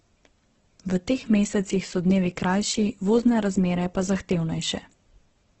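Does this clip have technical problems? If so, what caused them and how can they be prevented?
Yes. Throughout, the speech sounds grainy and rough, with nothing above 8.2 kHz: likely Opus compression at a rate pointing to 12 kbps, noise-filling starved bands. Encoding at a higher bitrate would prevent this.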